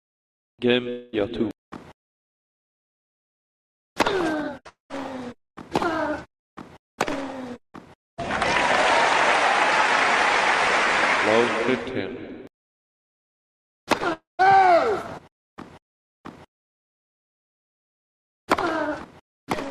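The stream likely suffered a long network dropout at 0.89 to 1.15 s, 4.69 to 4.92 s and 14.13 to 14.45 s, losing about a quarter-second each time. The receiver stretched the last sound into a fading buzz, leaving silence in the later two gaps before the audio resumed without the lost part.

At 13.98 to 14.01 s, about 20 ms of audio missed the decoder, a short concealed packet loss. The receiver continued the preceding sound to bridge it, heard as a brief smear just before the third dropout.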